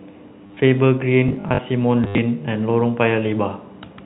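Packet loss with last packet repeated occurs from 0.47 to 0.57 s. About 70 ms of audio went missing across 100 ms, in runs up to 30 ms, which points to 10 ms packets. Each gap was filled by replaying the previous packet, giving a brief robotic stutter.

Robotic sound from repeated short buffers follows from 1.29 to 1.61 s, a rigid metallic buzz at 50 Hz that still roughly tracks the speech. The likely cause is audio arriving too seldom, with a 20 ms buffer looped in place of somewhat under half the real signal.

Packet loss with last packet repeated returns from 2.04 to 2.18 s, harsher this time. About 100 ms was lost across 140 ms, including one unbroken 80 ms run, so the repeated packet drones into a longer stutter.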